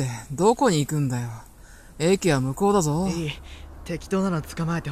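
No technical faults are audible.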